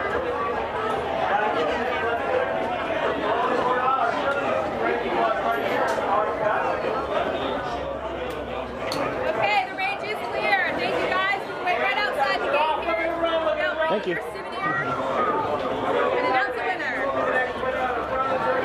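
No technical faults can be heard anywhere in the audio.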